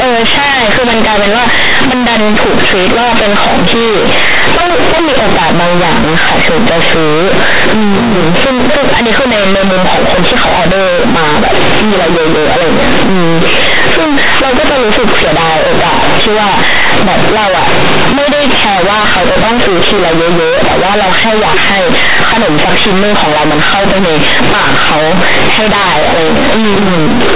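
From the first moment to the end, the speech has the companded audio read as linear fault: the mu-law bytes are being played straight as linear 8-bit samples, with no expansion step. Every sign change flings the output across roughly half its range, so quiet passages come out as big as loud ones and the waveform gets badly warped. You hear it as harsh, buzzy, very loud distortion, with heavy noise filling the pauses. The mu-law telephone coding underneath is fine, but it's buried under that.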